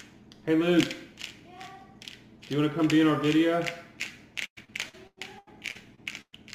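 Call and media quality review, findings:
Repeated packet loss (robotic sound), 4.45–6.35 s. Network/jitter-buffer path losing or late-delivering packets repeatedly; concealment stretches last audio over each hole. Result: choppy, robotic sound, about 29% of span concealed, gaps up to 113 ms.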